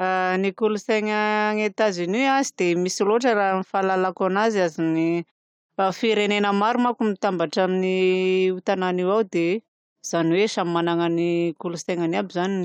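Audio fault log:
No faults detected.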